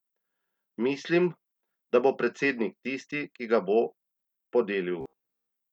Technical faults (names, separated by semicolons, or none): robotic sound from repeated short buffers